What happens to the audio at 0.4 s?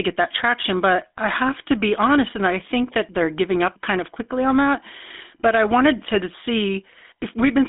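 At 0.4 s the speech carries GSM full-rate codec damage, present throughout the clip. The codec rebuilds the voice from a vocal-tract model fed by coarse, regularly spaced pulses, which fits a 13 kbps stream. Its band spans roughly 200 Hz to 3.6 kHz, and the voice has a plainly audible buzzy, gravelly roughness.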